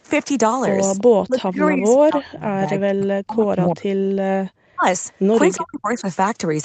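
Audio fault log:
0.98–1.03 s, 4.09–4.14 s, 5.13–5.19 s: echo leak. Three brief, faint copies of speech arrive 348 ms after their source, at about 25, 35 and 40 dB below the main speech. They are most likely a loudspeaker-to-microphone echo that the far end's canceller did not fully remove. On a spectrogram, each shows up as a thin, low-energy smear that repeats the harmonic pattern of earlier speech at a fixed lag. In the waveform, each is a tiny ripple far below the main speech.
1.25–3.93 s, 4.71–4.84 s, 5.56–6.07 s: speech suppressed in double talk. The speech dips sharply in pieces, for around two seconds in total across the first span, about 150 ms in the second and about 400 ms in the third. The drops reach about 40 dB, about 40 dB and about 30 dB. This is likely an echo canceller turning down both sides while they overlapped. On a waveform, the envelope collapses abruptly in chunks. 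A spectrogram shows energy blanking out across the band, up to the 8 kHz ceiling of the call path.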